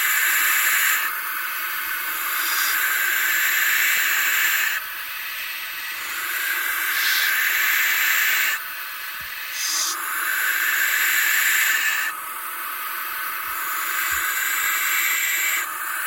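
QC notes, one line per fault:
1.98–6.97 s, periodic USB or driver dropouts: once every 1.0 s, roughly a millisecond of audio is replaced by silence, about seven times in all, heard as evenly spaced ticks that sound only where signal is present. A task stalling the USB bus or audio driver on a fixed schedule starves the stream briefly each time. The waveform shows tiny flat gaps with abrupt edges, and the spectrogram shows thin, evenly spaced vertical broadband stripes.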